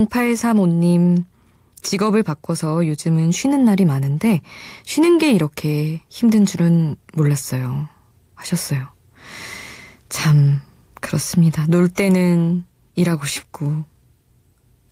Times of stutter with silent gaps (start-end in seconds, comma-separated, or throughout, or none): none